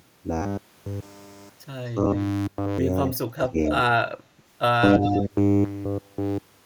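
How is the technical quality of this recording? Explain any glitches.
The recording has two faults from an echo canceller on a speakerphone link. Between about 3.1 and 5.2 seconds they leave an audible echo and briefly suppress the talker.

Echo leak occurs at 3.11–3.18 s, 3.67–3.71 s and 5.03–5.2 s. The far end's echo canceller likely failed to remove what its microphone picked up from its loudspeaker. A copy of the speech returns about 250 ms late as short scraps. The first is faint, about 25 dB below the speech. The second is about 10 dB below, and the last is only about 5 dB below.

Speech suppressed in double talk occurs at 3.3–3.55 s. Both ends were likely talking at once, and the echo canceller could not separate its own talker from the loudspeaker echo. It turned everything down, so the talker's level dips sharply, by around 25 dB at worst, for about a fifth of a second in total.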